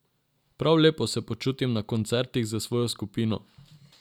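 No technical faults can be heard anywhere in the recording.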